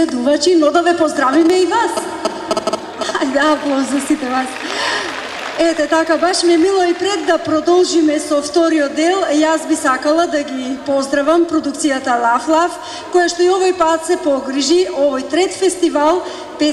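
A sharp, single loud pop cuts in at 1.50 to 1.52 s and again at 4.71 to 4.73 s, each jumping far above the surrounding level while the sound continues underneath. Each is likely a brief voltage spike from a plug, switch or static discharge.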